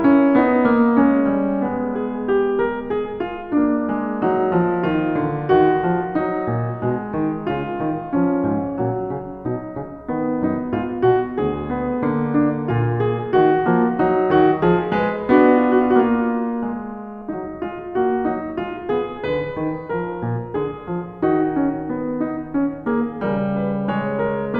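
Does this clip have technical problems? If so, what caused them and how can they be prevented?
Yes. From 0.0 to 5.5 s the music carries channel delay (comb filtering): one channel trails by about one sample, and summing to mono cancels treble toward a notch near 20 kHz. This gives a dull top, fixed and gently sloping, unlike a sweeping flanger or a steep low-pass cutoff. Keep both channels sample-aligned before any mono fold-down.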